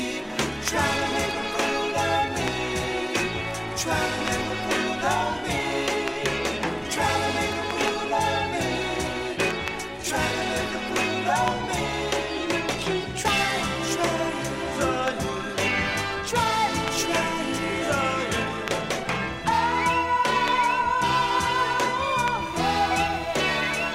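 Switching spikes from a 60 Hz mains supply leak into the signal path from 22.38 s to the end, adding a steady, raspy mains buzz roughly 20 dB below the audio.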